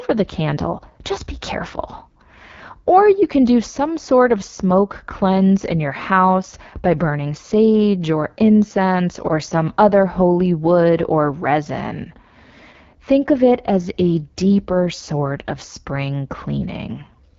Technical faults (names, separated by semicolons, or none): AMR wideband (HD Voice) codec